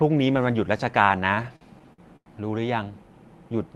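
A speech recording in which packets arrived late again and again between 1.27 and 2.29 s, so the jitter buffer kept running dry and the receiver stretched the last sound to cover nine gaps. The result is repeated stalls (stutter): dragging, hiccuping speech, with about 268 ms of concealed fill (roughly a quarter of that stretch) and the longest gap at 98 ms, though nothing is actually lost.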